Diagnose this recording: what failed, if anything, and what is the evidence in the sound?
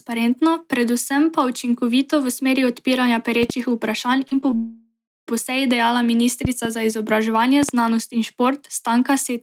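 Loud pops appear at 3.43–3.52 s, 6.45–6.67 s and 7.63–7.71 s, each a pair of sharp pops about 10, 15 and 15 dB above the speech, which carries on underneath. The likely cause is a voltage step or static discharge in the analogue wiring.

Short concealed packet loss occurs at 4.27 s, 4.41 s and 4.51 s, with about 40, 20 and 20 ms missing. These are network-stage gaps. The decoder extended the preceding sound and blended back, so each one is a brief smear or wobble in the speech.

A long network dropout runs from 4.56 to 5.30 s, losing about 720 ms. Concealment stretches the last sound into a fading buzz, followed by roughly 280 ms of silence. Speech then resumes without the missing part. This was likely a network outage rather than a local fault.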